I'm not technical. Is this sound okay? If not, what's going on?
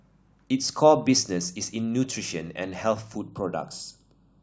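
No. From about 3.18 s to the end, the speech turns hollow. This is channel delay (comb filtering): one side arrives a fraction of a millisecond late. When both sides are mixed together, some frequencies cancel, starting around 2 kHz.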